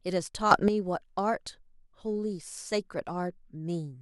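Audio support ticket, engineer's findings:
Sudden gain jump, 0.51–0.68 s, speech. Level steps up about 10 dB in a single sample, then drops back. Background noise rises and falls with it. Likely cause: a digital gain stage applying a new setting or bit shift with no ramp. Check gain-control path for unsmoothed parameter updates.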